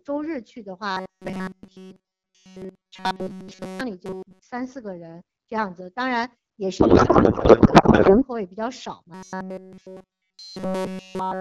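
Robotic sound from repeated short buffers runs from 0.91 to 3.81 s, again from 4.06 to 4.42 s, and from 9.14 s to the end. The sound becomes a rigid metallic buzz fixed at 188 Hz, most likely because audio arrived too seldom and a tiny slice, about 5.3 ms long, was replayed in place of nearly all the real material (most of it in the shorter middle stretch).

Codec payload misread follows at 6.79 to 8.24 s. The AMR-WB stream's bits are unpacked with fields in the wrong positions, which fits octet-aligned frames read as bandwidth-efficient, so the speech turns into garbled warble and noise barely tracking it.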